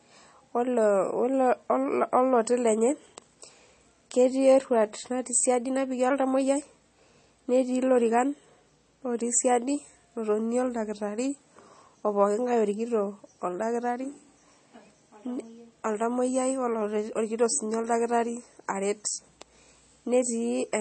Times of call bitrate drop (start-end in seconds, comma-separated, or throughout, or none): none